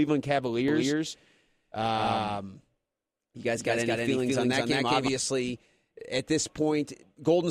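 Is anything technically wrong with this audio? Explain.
Yes. From 0.68 s to 5.08 s the speech carries a doubled audio track: a second, full-band copy runs roughly 200 ms behind the original at about the same level. The likely cause is the signal being picked up again through a slower path, or two out-of-step copies left in an edit. The result is a slapback-like echo with no decay or room colour, switching on and off abruptly at those boundaries.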